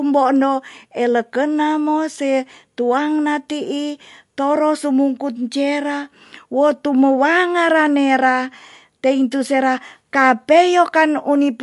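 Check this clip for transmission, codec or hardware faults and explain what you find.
The clip carries one codec fault, present throughout: MP3 compression. The treble stops dead at about 11.3 kHz, and the speech has a plainly audible watery, swirling quality, with chirpy s sounds and smeared attacks. This is likely a starved encoder, consistent with roughly 50 kbps, dropping the top band and zeroing weak spectral lines that flicker between frames. Plain low-pass filtering would dull the sound without the swirl.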